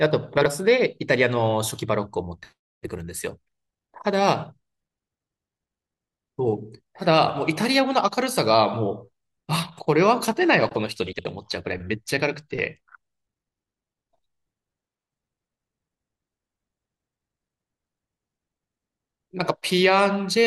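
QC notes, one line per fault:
0.37–0.46 s and 11.12–11.25 s, frames out of order: neighbouring runs of frames were decoded in swapped order, exchanging the halves of each stretch (about 43 ms and 64 ms blocks). The speech briefly flutters, garbled; no time is lost.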